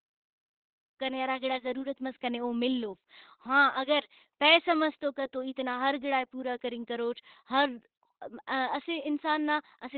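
After a smooth fade-in around 1 s, the speech stays muffled and hoarse, with nothing above 4.3 kHz. This is likely heavy Opus compression in its narrowband speech mode, consistent with roughly 12 kbps.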